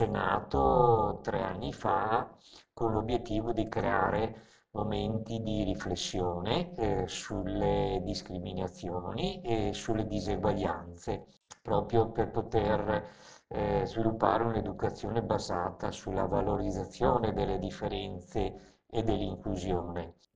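Right from the start and all the way through, there's overlap-add ripple. Somewhere in the chain the audio was chopped into windowed frames and stitched back together with an overlap that doesn't add up to a steady gain, so the level dips and swells once per frame. Here the swing is huge, about 60 dB, at a rate of around 300 Hz, so it comes across as a harsh, metallic buzz with extra tones around each note riding on everything rather than a gentle wobble.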